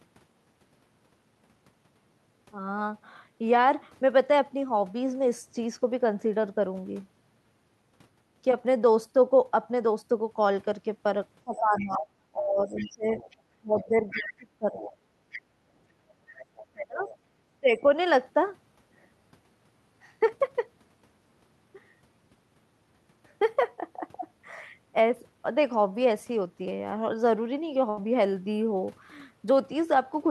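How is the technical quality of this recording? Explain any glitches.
The recording has a cluster of echo-cancellation faults between about 11 and 18 s, and one short dropout near the end.

Speech suppressed in double talk appears from 11.44 to 14.94 s and again from 16.73 to 17.84 s. While both ends talk at once, the near talker's level sinks by roughly 25 dB at worst, over about 3 s in the first stretch and about half a second in the second. The likely cause is that the echo canceller could not separate the local talker from the loudspeaker echo, so it turned everything down. The dips line up with the other voice, unlike a random level fault.

The other side's voice leaks through in four spots: 11.56–11.97 s at about 20 dB below the speech, 12.77–14.22 s at about 10 dB below, 14.76–15.41 s at about 15 dB below, and 16.35–17.17 s at about 25 dB below. The likely cause is residual loudspeaker echo left in the microphone signal. 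A second, fainter voice rides under the talker. That sets it apart from suppression, which removes sound instead of adding it.

The background is gated by the echo canceller between 15.25 and 16.45 s. The room tone drops by about 9 dB, for roughly half a second in total, and comes back when the canceller releases. Only the ambience ducks here. That distinguishes it from double-talk suppression, where the voice itself is cut.

A burst of packet loss hits at 27.89–27.99 s. About 76 ms of lost audio was filled by extending the last sound and fading it, which gives a brief held buzz or hiss. Speech then resumes slightly further along, with about 80 ms skipped. It is a single isolated event, unrelated to the far-end voice, unlike the echo faults.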